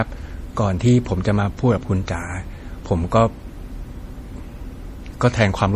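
MP3 compression damage runs through the whole of this speech clip, from start to finish, and is plainly audible. Nothing reaches above 15.2 kHz, a hard treble ceiling that likely comes from an MP3 encoder starved of bits, which fits a low bitrate of around 40 kbps. With too few bits, weak frequency lines are dropped and return from frame to frame, giving the speech a watery, swirling texture, metallic chirps on s sounds and smeared onsets.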